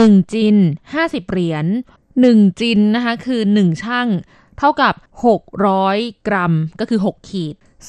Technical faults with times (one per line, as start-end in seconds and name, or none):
0.00-7.88 MP2 compression